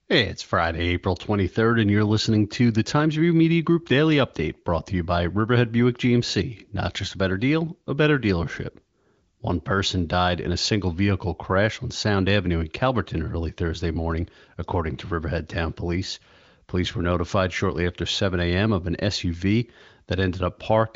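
Speech heard through an AMR wideband (HD Voice) path, with content ending near 7.6 kHz and the clarity of that codec's upper rates, and nothing technically wrong with it.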